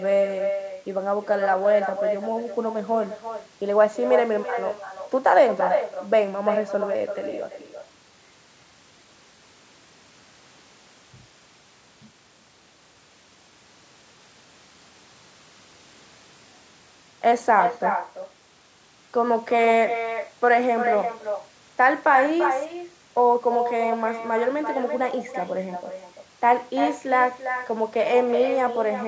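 From start to end, the speech carries echo with no canceller. A far-end loudspeaker feeds the microphone back. A thinner copy follows about a third of a second later, about 7 dB down.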